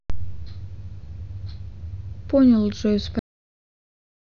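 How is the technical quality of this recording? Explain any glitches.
There's one clear glitch: a cut-off end. At 3.19 s the speech just stops mid-sound and drops straight to digital silence, with no natural decay, through to the end. The final stretch of audio was never written out or played.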